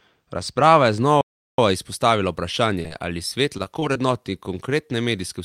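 A speech recording with a few distinct problems stacked up across it. Right from the start to about 1.01 s there's channel delay with comb filtering: one side trails the other by a couple of samples, around a twentieth of a millisecond, and once they're folded to mono the shared high end cancels with a first notch near 10 kHz, so it sounds dull. Then from 1.21 to 1.58 s there's a playback stall, about 370 ms of dead silence mid-flow before the sound picks back up, most likely the player running dry of data or its thread getting blocked. Around 2.82 to 2.86 s and again at 2.88 to 2.93 s you get short concealed packet loss, two 20 ms holes that the decoder papered over by stretching the preceding sound, heard as quick little smears back to back. Finally, 3.58 to 3.97 s has repeated packet loss with that robotic sound: four separate gaps, the longest about 21 ms, each patched the same way, so roughly a fifth of that stretch is synthetic fill and it comes across choppy.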